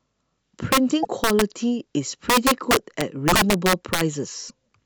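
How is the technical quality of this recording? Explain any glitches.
Quality is poor: the speech is broken by two kinds of fault, harsh cracking on loud passages and brief garbled dropouts.

Violent cracks, far sharper than clipping, hit the speech at 0.72–0.78 s, 1.24–1.42 s and, most severely, 2.30–4.01 s. This is integer overflow: peaks driven about 3–10 dB past full scale wrap to the opposite sign instead of being limited.

Short chirps or holes appear at 1.02–1.07 s, 3.33 s and 4.48–4.51 s, where the audio briefly skips ahead. The likely cause is a broken MP3 bit reservoir: after frames were dropped, the next frames borrowed data from the wrong place. The gaps fit 24 ms frames.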